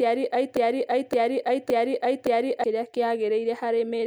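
At 0.57 s the speech catches on a broken-record loop: a chunk of about 0.57 s plays, then plays again, identically and back to back, four times over, until normal playback picks up at 2.64 s. Whatever should have been heard in that stretch is simply gone. The likely culprit is the player or stream stalling and re-sending the last fragment it had buffered, which is why the repeats are exact rather than drifting.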